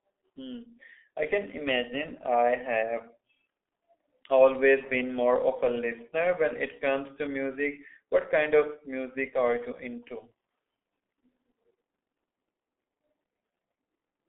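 From start to finish the speech carries heavy G.723.1 codec damage. Nothing survives above 3.8 kHz, the band sits roughly between 250 Hz and 3.5 kHz, and the slow-updating voice model leaves it muffled and hoarse with smeared consonants, which fits the 6.3 kbit/s mode.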